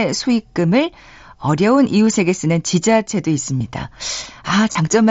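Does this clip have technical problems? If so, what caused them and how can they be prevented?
Yes: concealed Bluetooth headset packet loss at 2.06 s, 3.58 to 3.61 s, and 4.72 to 4.75 s. Packets dropped between headset and phone, and the receiver filled each gap, about 15 ms at first and then 30 ms, by repeating a matching stretch of recent waveform. On a waveform this shows as identical repeated cycles at full level; on a spectrogram, frozen harmonics ending in a slight smear. Keeping the headset close to the phone, away from Wi-Fi and other 2.4 GHz interference, prevents it.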